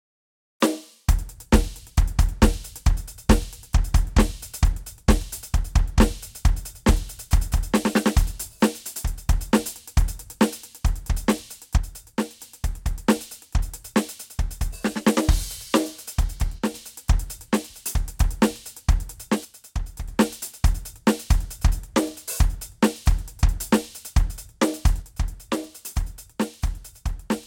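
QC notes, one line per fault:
11.77–12.41 s, 16.58–16.74 s, 19.45–20.09 s and 25.02 s to the end: one channel drops out. The music sinks abruptly by about 6 dB, likely because one stereo side vanishes so shared content loses half its level.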